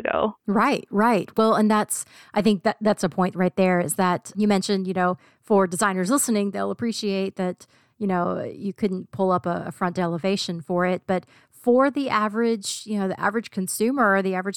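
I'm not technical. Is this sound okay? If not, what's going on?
Yes, this recording is fine. Nothing in it sounds broken or out of place, so there's nothing you need to fix.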